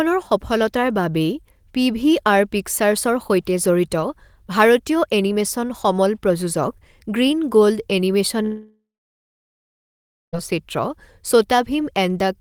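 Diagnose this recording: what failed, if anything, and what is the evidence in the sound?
The network stage most likely failed with a long network dropout: packets stopped arriving at 8.43 s. The receiver stretched the last speech into a fading buzz or hiss, then about 1.5 s of silence followed, and speech resumes at 10.35 s with roughly 1.9 s missing.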